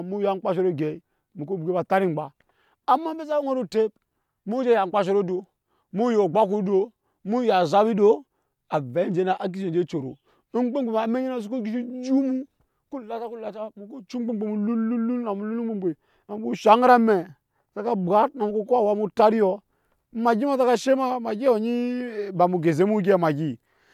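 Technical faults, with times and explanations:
Nothing technical goes wrong anywhere in this speech recording, so there's nothing to flag.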